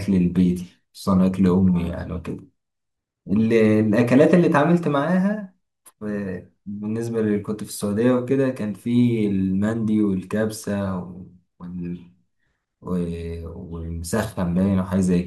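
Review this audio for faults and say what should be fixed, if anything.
No faults; nothing needs fixing.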